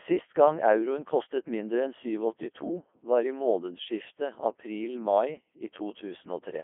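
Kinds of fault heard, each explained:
Codec 2 vocoder: the speech runs through the whole clip as a low-rate parametric vocoder, probably around 3.2 kbit/s, rebuilding the voice from pitch, voicing and a spectral envelope with sine synthesis, so it sounds robotic and buzzy, confined to a 250 to 3400 Hz line band with nothing above 3.5 kHz.
Pre-emphasis left on: from 3.8 s, after "var i", to the end, a treble boost with no matching de-emphasis lifts highs, matching an FM 50 µs curve at about 11 dB at 10 kHz relative to 1 kHz, making the sound thin, bright and sibilant.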